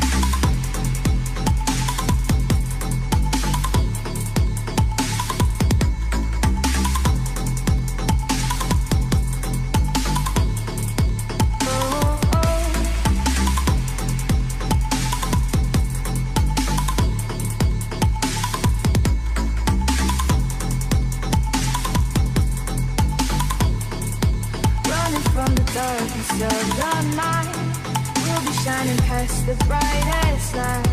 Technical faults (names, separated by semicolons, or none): none